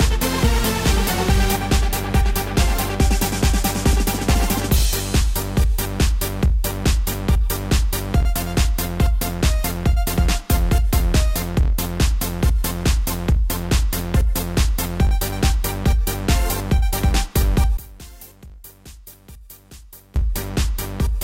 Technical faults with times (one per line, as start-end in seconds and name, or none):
17.77-20.16 one channel inverted